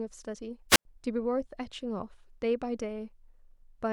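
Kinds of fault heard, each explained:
Wireless microphone squelch dropout: between 0.69 and 0.85 s the speech breaks as a brief rise of hiss gives way to a hole of near silence lasting about 95 ms. The radio link from the microphone faded far enough that the receiver's squelch muted its output.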